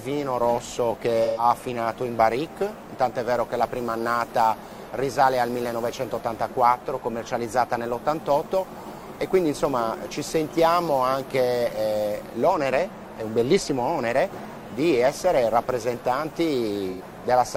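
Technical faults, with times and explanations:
1.25–1.44 s and 16.91–17.01 s, AAC frame loss with concealment: for about 128 ms, then 85 ms, the audio turns smeared, noisy or phasey. That fits two or three lost frames that the decoder patched by reusing the last good spectrum with jumbled phase. On a spectrogram each patch is a blurred block with no transients and its harmonics stretched flat across time. The waveform loses its detail there and shows no clean cut.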